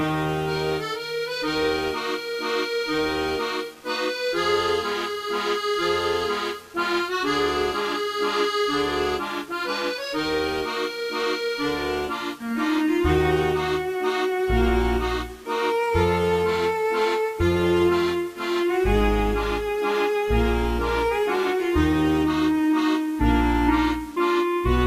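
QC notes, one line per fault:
Throughout: low bit depth without dither, grainy grit that tracks the sound and worsens when quiet, likely 7-bit rounding with no dither, error about 30 dB down.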